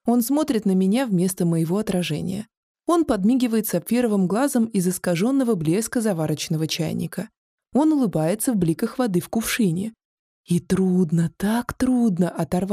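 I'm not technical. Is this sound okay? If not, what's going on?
Yes, nothing wrong here.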